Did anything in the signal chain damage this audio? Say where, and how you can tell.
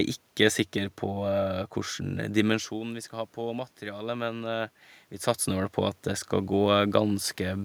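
No, nothing in the signal chain damaged this speech; the steady room noise and the level shifts around 2.5 s and 5 s come from the recording space and the talker's position, not from any stage of the system.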